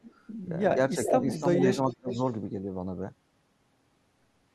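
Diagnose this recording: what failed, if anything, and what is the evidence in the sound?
Call processing at the far end likely let loudspeaker pickup past its echo canceller. An echo leak returns a copy of the speech delayed by about 0.4 s at 0.04–0.14, 1.04–1.1, 1.34–1.93 and 2.11–2.22 s, ranging from about 25 dB down to only about 5 dB below the speech.

The same call processing likely suppressed speech in double talk, lowering the talker's speech along with the echo when both sides overlapped. The speech dips between 0.96 and 1.62 s by about 10 dB, then falls by about 35 dB between 1.87 and 2.21 s.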